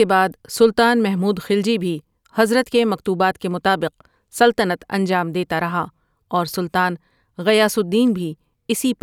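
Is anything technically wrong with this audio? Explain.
No, nothing technically wrong can be heard anywhere in this speech recording.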